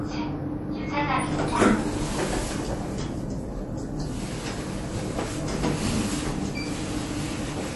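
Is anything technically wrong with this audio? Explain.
Yes. Throughout, nothing is present above 11.5 kHz, and weak detail flickers watery and swirly, with smeared attacks: likely MP3 compression starved of bits, fitting a bitrate near 48 kbps.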